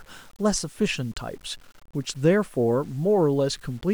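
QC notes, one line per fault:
Throughout, low bit depth without dither: grainy distortion tracks the speech, roughly 35 dB down, quiet tails sputter. Likely undithered truncation, consistent with 8 bits.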